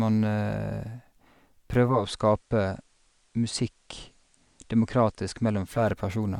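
From 1.78 s to 5.91 s, digital radio blending to analogue: a 310 ms cross-fade hands the speech to the FM broadcast, dropping the level about 2 dB and adding faint hiss. A codec bandwidth drop would bring no hiss and no fade back.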